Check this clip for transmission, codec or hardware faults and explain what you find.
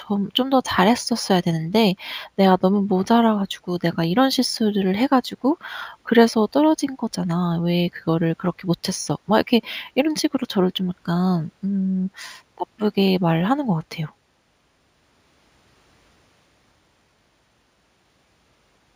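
One fault runs through the whole speech clip: imaging from linear upsampling. The audio sounds like a 16 kHz source raised to 48 kHz by straight-line interpolation. That weak filter dulls the top of the band and leaves a faint mirror copy between 8 kHz and 16 kHz, roughly 30 dB down. It is heard as a light metallic shimmer on sibilants. On a spectrogram it shows as a pale, flipped reflection of the speech energy above 8 kHz.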